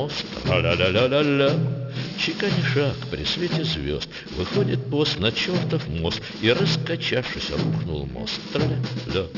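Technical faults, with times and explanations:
Throughout, aliasing: content above 6 kHz folds back as gritty, unrelated tones roughly 15 dB below the signal, which fits a drop to a 12 kHz rate without low-pass filtering.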